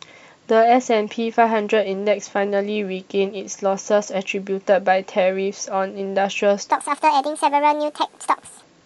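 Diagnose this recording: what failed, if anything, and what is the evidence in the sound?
From 6.71 s to 8.63 s the speech suddenly turns high and hurried, running 1.5 times too fast and raised about 7 semitones, a clear wrong sample rate fault at the playback stage. The samples are clocked out faster than they were captured, with no conversion, which fits 32 kHz material played at 48 kHz. On a spectrogram, harmonics and formants jump up by a factor of 1.5 and syllables shrink in time. The waveform's periods visibly compress.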